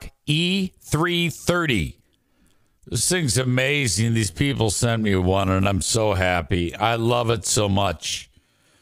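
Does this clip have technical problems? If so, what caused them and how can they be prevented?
Yes. A time-stretched section runs from 1.76 s to the end. The pace drops to 0.69 times speed while pitch holds, so it drags. Software likely repeated short pieces to fill a longer slot. Prevent this by trimming or re-editing content instead of stretching audio to fit.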